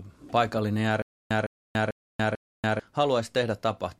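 From 1.02 s to 2.80 s the speech breaks into a stutter with silent gaps: a 158 ms fragment repeats four times, each followed by about 286 ms of dead silence, so the burst returns every 444 ms at a mechanical, even pace. The likely cause is a stalled player or stream replaying its last buffer on each retry. On a waveform this shows as identical blocks separated by flat lines, and on a spectrogram as repeated matching patches between fully blank columns. The speech that belonged in that span never plays.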